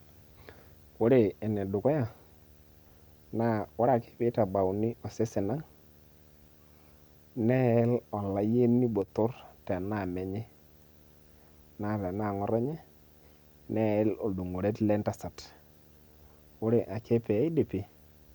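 Running under the whole speech clip there's a steady video or display buzz, sitting roughly 35 dB below the talking. Its fundamental is at 75 Hz, the field rate of the picture, with a layer of gritty hash stacked above it. That's a screen or video cable bleeding into the audio path, so the refresh cycle shows up as a low, raspy hum that never lets go.

Then, from 9.02 to 9.08 s, the level suddenly falls by 6 dB for about 60 ms before snapping back. It's a brief dip rather than a full dropout. That pattern is most likely one channel dropping out: with one side of the stereo pair gone, the mono sum keeps only half of what both channels shared, so everything common sags abruptly by 6 dB for that short stretch.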